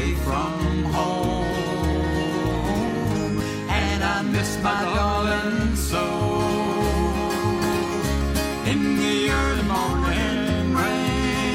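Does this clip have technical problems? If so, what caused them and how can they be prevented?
Yes. From 0.98 s to 11.45 s, about ten clicks recur every 0.95 s. These are likely clock drift buffer slips: two devices run at rates roughly 700 ppm apart, so the buffer between them drifts until a block of about 30 samples is dropped or repeated. The strict, metronomic spacing separates this from packet-loss glitches, which fall irregularly. Locking both devices to a shared word clock, or resampling asynchronously between them, prevents it.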